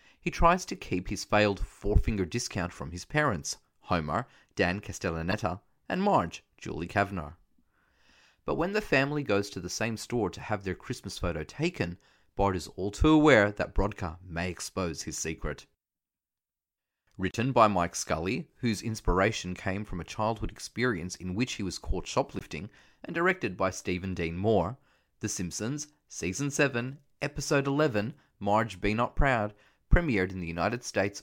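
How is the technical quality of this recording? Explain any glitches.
The recording is marred by three short glitches caused by damaged data in a compressed stream, at 5.31–5.34 s, 17.31–17.35 s and 22.39–22.42 s. Bytes in the encoded speech were corrupted, so the decoder misread those frames, lost sync and had to hunt for the next valid frame header. Each event is heard as a brief chirp, squawk, click or short hole lasting roughly 25 to 45 ms, cutting abruptly across the speech before normal decoding resumes.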